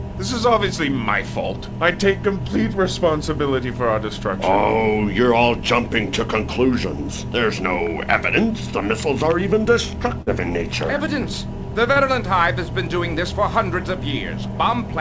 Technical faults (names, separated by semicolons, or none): short concealed packet loss